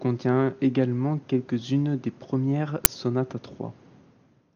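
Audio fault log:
2.85 s, uninitialised buffer: a loud 10 ms crack between "des premières" and "sonates à", where leftover memory was played as samples.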